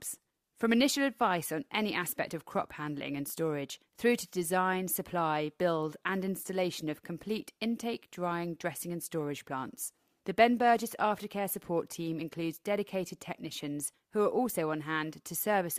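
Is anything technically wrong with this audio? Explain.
No, nothing technically wrong can be heard here.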